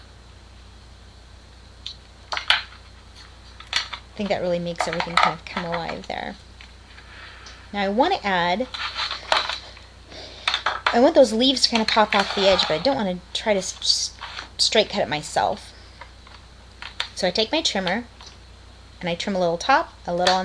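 No technical faults can be heard anywhere in the clip, so there is nothing to describe in time order.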